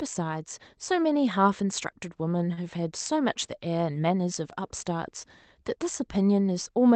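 At 2.53 s a packet arrived late over the call path, which cuts off near 8 kHz, and the jitter buffer ran empty. This short stall from a late packet stretched the last sound by 36 ms, to 2.59 s, giving a held, faintly buzzy moment. No speech is lost, but everything afterward runs 36 ms later.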